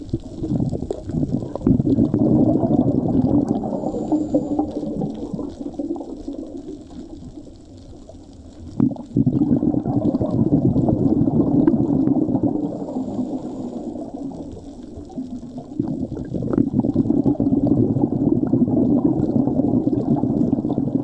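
Nothing in this audio stood out as a technical problem on listening.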